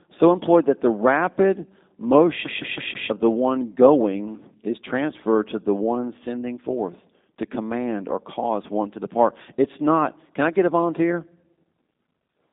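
Throughout, the speech has passed through a G.729 codec, likely the G.729A variant at a rate consistent with 8 kbit/s, which rebuilds each frame from a vocal tract filter, a pitch predictor and a few pulses. Nothing survives above 3.7 kHz, so the voice sounds narrow, plainly rough and synthetic.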